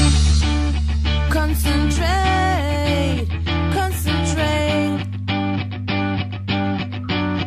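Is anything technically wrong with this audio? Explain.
No, no technical faults here.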